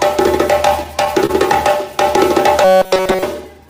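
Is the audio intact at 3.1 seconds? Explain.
No. From 2.65 to 3.24 s there is robotic sound from repeated short buffers, likely because fresh audio arrived too seldom and the player kept looping roughly 5 ms of old material throughout. That imposes a rigid, metallic 188 Hz buzz over the sound.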